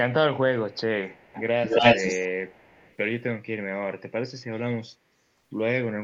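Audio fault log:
0.7–0.8 s, 1.12–1.42 s, 1.63–2.28 s, 2.48–2.97 s: echo leak. A copy of the speech returns 270 ms late. It is faint at first, then louder than the speech itself at 1.63–2.28 s. A far-end loudspeaker echo canceller likely let it through.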